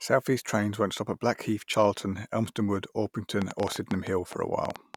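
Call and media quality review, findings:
Train of clicks, 3.42 to 4.95 s. Around fifteen similar pulses, about 8.5 per second, unevenly spaced, ticking over the speech at up to some 15 dB above it. Likely a faulty connection or power supply, or interference from nearby equipment.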